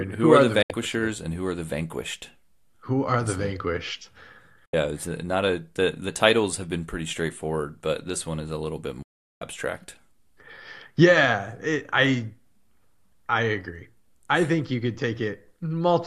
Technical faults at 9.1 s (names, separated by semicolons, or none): digital broadcast dropout